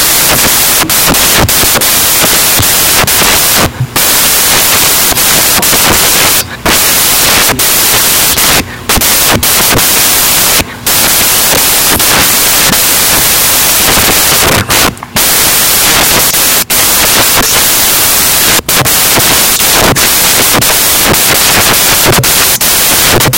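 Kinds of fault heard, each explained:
Samples built from the wrong bytes: each sample's bytes are combined wrongly, so fast-changing low bits dominate. Broadband noise covers the speech throughout.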